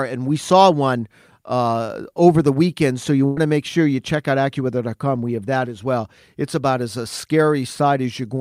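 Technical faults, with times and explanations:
3.25 to 3.38 s, burst of packet loss: the sound briefly smears into a held continuation of its last moment that fades away, and then the speech picks up at "to make sure you" with a jump. Packets were lost or arrived too late, so the receiver filled a gap of about 113 ms by extending and attenuating the final sound. About 120 ms of the original speech is missing.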